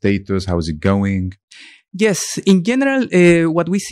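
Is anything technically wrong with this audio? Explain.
Yes. The speech shows hard clipping in four places: 0.06 to 0.10 s, just before "how is it"; 0.86 to 0.91 s, right after "how is it"; 2.48 to 2.53 s; and a longer stretch from 3.21 to 3.59 s. The peaks exceed what the signal path can carry, by about 2, 3, 5 and 3 dB respectively, so their tops are sliced flat. Those squared edges generate high-order harmonics, heard as crackle on the peaks.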